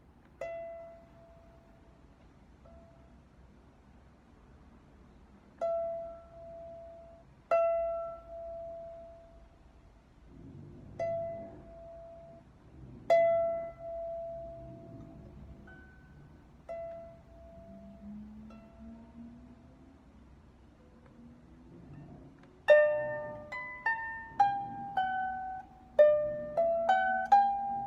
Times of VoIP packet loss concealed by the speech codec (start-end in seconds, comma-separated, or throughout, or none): none